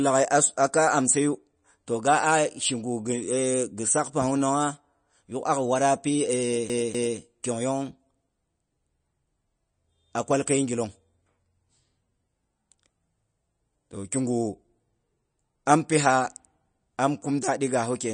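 All the way through, the speech has plainly audible watery, swirly artefacts and nothing above 9.4 kHz, likely from MP3 compression at a low bitrate, roughly 34 kbps. From 6.69 to 7.19 s there's a CD stuck on one turn: the laser keeps jumping back, so a 248 ms slice plays twice with a brief mute at each jump, giving that quick, even skipping-disc stutter.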